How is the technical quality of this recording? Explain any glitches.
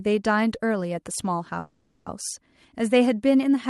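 The recording has one glitch, a call audio freeze from 1.59 to 2.08 s. Packets were most likely held up in transit, so the jitter buffer ran dry and the receiver had nothing new to play. It kept extending the last fragment of sound as a fading buzz- or hiss-like tail for about 0.47 s instead of going silent. When the packets arrived, the speech resumed exactly where it had stopped. Nothing is lost, but everything after that point arrives roughly half a second later.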